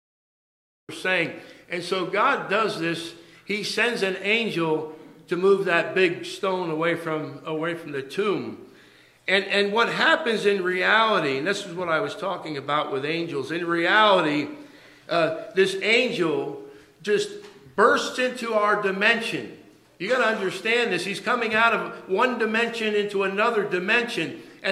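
For the first 0.89 s there is nothing but digital silence, and then the sound arrives abruptly, already in progress: a cut-off start, where capture began late and the opening of the sound was never recorded. What separates it from an ordinary quiet lead-in or a gentle fade-in is that the level jumps straight from silence to full signal at 0.89 s, with no attack or ramp, so the sound enters partway through rather than beginning.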